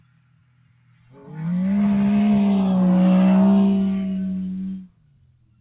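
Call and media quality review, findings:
Noise suppressor applied to music or sounds, throughout: level pumps and flutters, held material and tails sink while onsets get through, with swings of around 20 dB. Probable component: speech-tuned noise suppressor left enabled. Mechanism: it treats steady and decaying sound as noise and attenuates it.

Sound cut by the noise suppressor, 0.00–1.36 s: sound thins and sinks by up to about 17 dB, roughly a second and a half affected in total. Probable component: the same noise suppressor. Mechanism: it classes the opening's sustained content as noise and ducks it.

Sound cut by the noise suppressor, 4.77 s to end: level drops by up to about 17 dB and the decay is cut short. Probable component: the same noise suppressor. Mechanism: the fading tail is gated down as noise. Call path audible as a band limit with nothing above 4 kHz, which fits G.711 mu-law at 64 kbps.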